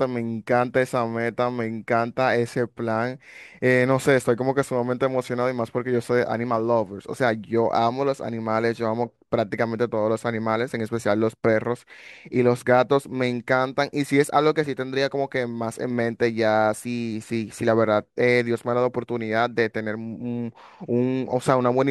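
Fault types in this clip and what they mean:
Dropped samples: the stream likely skipped about a single sample, so the waveform jumps abruptly from one value to a later one. No sound is lost. Instead the speech carries a single sharp click at 14.08 s and again at 18.99 s.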